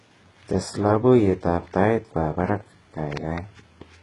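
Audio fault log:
Throughout: HE-AAC compression, likely cause. Heavy codec damage, with nothing above 11.1 kHz. The treble sounds synthesised rather than real, and sibilants come out gritty and lispy because upper bands copied from lower ones misalign harmonically at the crossover, which fits a very low bitrate around 12 kbps.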